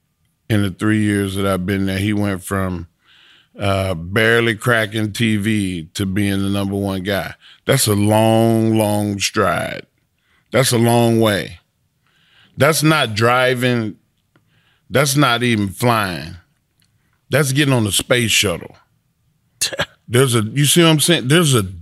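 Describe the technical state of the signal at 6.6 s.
At 6.6 s the speech signal is intact, with no dropout, clipping, distortion or other fault.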